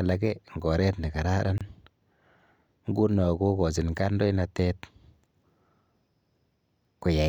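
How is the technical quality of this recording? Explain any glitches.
The recording has one glitch, a brief hole in the speech.

At 1.58 s, a gap at a join of encoded pieces opens for 27 ms. Each piece, repeating every 6 s, was encoded separately and joined untrimmed, so encoder start delay and last-frame padding leave silence. Unlike a dropout, speech resumes exactly where it stopped, with smeared edges.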